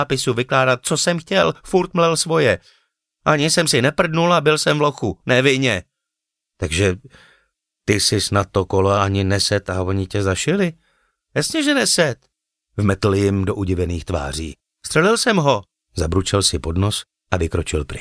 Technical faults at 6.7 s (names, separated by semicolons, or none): none